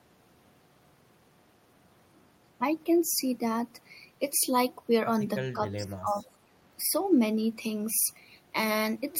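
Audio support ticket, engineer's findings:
Echo canceller likely misjudging double talk and attenuating near-end with echo. Speech suppressed in double talk, 5.53–6.49 s, dropping by about 20 dB.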